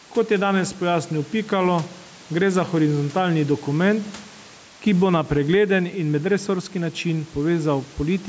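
Gain pumping runs throughout: the gain swings around 5 dB, pulled down under loud syllables, likely from a fast limiter. Loud and soft parts sit closer in level.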